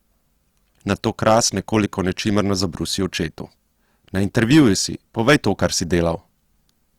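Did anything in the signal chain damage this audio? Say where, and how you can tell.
Yes. Throughout the clip, the speech sounds rough and grainy, and the damage is plainly audible. Tones turn noisy rather than swirly, and there are few spectral holes. The bandwidth stays full, with content reaching about 20.3 kHz. This points to the codec stage, likely Opus compression in its music (CELT) mode. Starved bands get filled with folded or noise-like energy. The amount of grain fits a low bitrate near 24 kbps.

There is also hard clipping in three bursts. The first runs from 1.27 to 1.39 s, just before "nekoliko nečimrno zabrusi očetu". The second runs from 4.38 to 4.67 s, and the third from 5.28 to 5.99 s. The signal overdrove a gain or conversion stage by about 5 to 6 dB. Its peaks were cut flat, and the flat tops add high harmonics.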